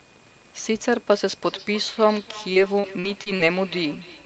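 From 1.43 s to the end of the clip, a feedback echo between two devices appears: a second device in the room replays the call audio into this microphone, and the local echo canceller cannot remove it. The speech returns roughly every 0.3 s at about 19 dB below the direct speech, thinner and ringing with each pass.

Between 2.53 s and 3.41 s, repeated packet loss gives a choppy, robotic texture. Several short gaps, the longest about 40 ms, are each filled by extending the preceding sound, so about 18% of that stretch is synthetic and pieces of the speech go missing.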